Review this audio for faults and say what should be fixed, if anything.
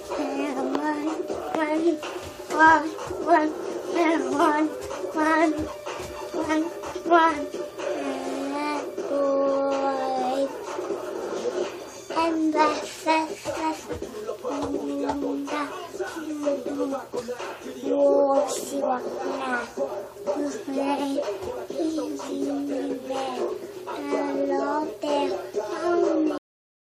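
Sound stops abruptly at 26.38 s with no decay into silence: a cut-off end, where the final buffers were never written or played out. Flush and close the output fully before ending the file.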